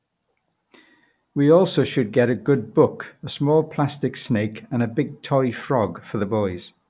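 Speech recording with no audible technical faults: no dropouts, clipping, glitches or level problems anywhere in the clip.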